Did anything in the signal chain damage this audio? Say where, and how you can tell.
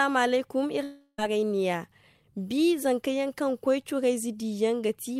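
Yes, there's a long network dropout from 0.83 to 1.19 s. At 0.83 s the real audio stops and the last bit of sound gets stretched into a buzzy, hissy tail that fades over about a third of a second, then there's a brief near-silent gap before things pick up at 1.19 s with roughly 0.35 s simply gone. That's receiver-side concealment papering over missing data, most likely packets that never arrived over the network.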